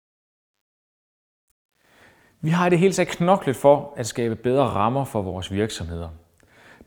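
From the start to 2.02 s the speech fades in with truncation distortion: the gain stage drops low bits without dither, consistent with about 10-bit resolution, so the quiet opening turns stepped and gritty, worst from 0.0 to 1.55 s.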